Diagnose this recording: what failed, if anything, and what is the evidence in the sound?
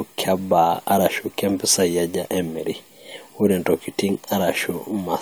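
Overlap between stream segments at 2.33 s, in streaming playback where segments are joined. The speech gives a tiny skip where roughly 15 ms of sound is missing and the waveform jumps instead of continuing smoothly. Two segments carried overlapping time stamps, and the player trimmed the supposed duplicate at the join, discarding audio that was never repeated. With 6-second segments, this is the only join the clip crosses.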